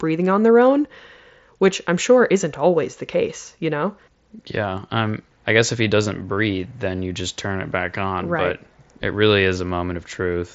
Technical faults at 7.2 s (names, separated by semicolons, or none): none